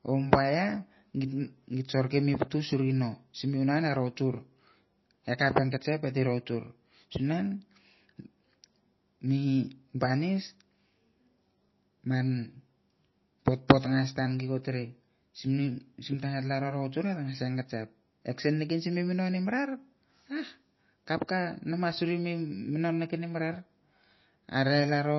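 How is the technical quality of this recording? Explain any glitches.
Quality is poor, with plainly audible compression damage across the whole speech clip. Throughout: MP3 compression, likely at a low bitrate around 24 kbps, cuts everything above 5.8 kHz and flickers weak bands, sounding watery and dull; spectrograms show a hard ceiling and speckled gaps.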